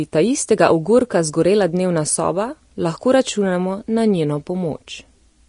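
A short speech recording carries Vorbis-style compression damage from start to finish, plainly audible as a hissy, grainy treble, roughened vowels and softened consonant attacks. A spectrogram shows a hard ceiling with nothing above 10.6 kHz, and beneath it the upper band breaks into speckled, noise-like patches. Fine detail there appears to have been quantised away and replaced with noise of similar energy. The cause is likely low-quality Vorbis encoding, with the damage fitting a bitrate of around 34 kbps.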